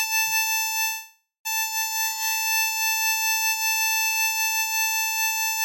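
A music clip with two timing faults. From 0.87 s to 1.47 s there is a call audio freeze, likely from packets held up in transit: the last sound carries on as a fading buzz, ending in about 160 ms of near-silence before the music resumes where it stopped. On a spectrogram this appears as smeared horizontal bands thinning to a blank strip. Then from 1.97 s to 3.03 s a jitter buffer slow-down stretches the music to 80% speed at unchanged pitch, adding 227 ms as the receiver repeats short periods to rebuild its reserve. The waveform shows repeated, near-identical cycles, and spectrogram features look horizontally elongated.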